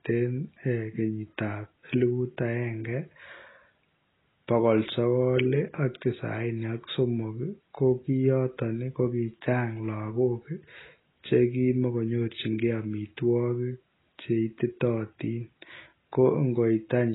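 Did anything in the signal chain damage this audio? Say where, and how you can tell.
Yes. Throughout the speech the sound is dull and smeared, with nothing above 3.9 kHz and a warbling, fizzy texture on sustained sounds and sibilants. The codec stage is the likely cause: heavy AAC compression, AAC-LC at a rate that fits about 16 kbps, dropping high bands and coarsely quantising the rest.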